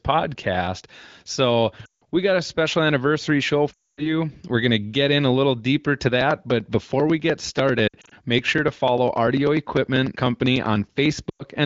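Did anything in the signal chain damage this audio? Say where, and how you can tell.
Yes. At the network and codec stage, lost AMR speech frames: the decoder concealed missing frames by repeating its last good settings with falling gain. The sound smears and fades just before "we got a special" (1.85–2.03 s), after "a special anniversary show" (3.73–4.11 s), in scattered short gaps at 7.88–8.14 s, and at 11.29–11.43 s.

At the driver or buffer stage, periodic USB or driver dropouts: from just after "a little deeper to" at 6.21 s until 11.55 s, some fifty regular ticks sound every 0.099 s. Each one skips about a millisecond of audio, which points to the bus or driver stalling on a fixed cycle.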